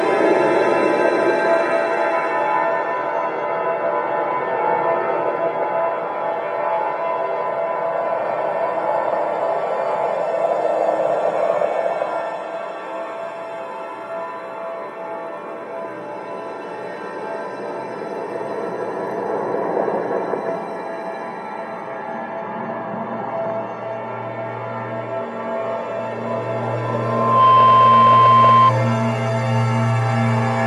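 Loudspeaker feedback squeal from 26.82 to 28.73 s: the microphone hears its own loudspeaker, and a 1 kHz tone swells over roughly 0.7 s to about 10 dB above the sound.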